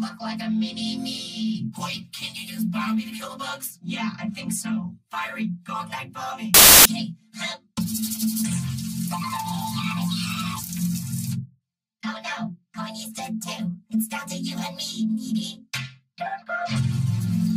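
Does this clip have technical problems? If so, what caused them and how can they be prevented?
Yes. Samples built from the wrong bytes, from 6.54 to 6.85 s: for about 0.31 s the sound is replaced by a burst of loud, harsh broadband noise. The bytes making up each sample were reassembled wrongly, either shifted by one byte, taken in swapped order or read with the wrong alignment, so the rapidly fluctuating low-order bits became the dominant part of every value. Prevent it by declaring and checking the sample format, byte order and frame alignment explicitly at every read and conversion step.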